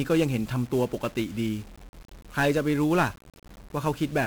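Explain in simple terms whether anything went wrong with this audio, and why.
Something did go wrong, and it lasts from start to finish. The speech has been squeezed with 1-bit DFPWM compression. This method keeps only one bit for each tiny slice of sound. That bit just tells the signal to go up or down a little. So the true shape of the sound is never stored, only a rough staircase that chases it. The result is a constant fuzzy, crackly layer over the voice. The crisp high sounds get buried under hiss.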